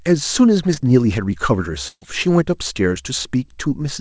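At 0.74 to 0.78 s there is a short concealed packet loss. About 20 ms of audio never arrived, and the receiver patched it by extending the preceding sound. It is heard as a brief smear, and on a spectrogram it shows as a short stretch continued from the sound before it, with a soft seam at each edge.

From 1.88 to 2.03 s comes a burst of packet loss. About 140 ms went missing and was filled by continuing the last sound at a falling level, ending in roughly 50 ms of silence before the audio resumes further along. It is heard as the last sound held and fading out. The waveform shows a decaying stretch that drops to flat, and the spectrogram shows smeared, frozen sound that ends in a blank gap. Throughout the clip the call codec leaves nothing above 8 kHz, which fits G.722.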